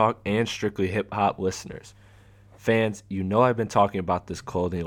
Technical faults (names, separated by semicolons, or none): mains hum